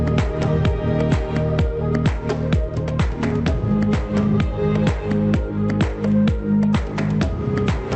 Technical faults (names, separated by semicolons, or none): none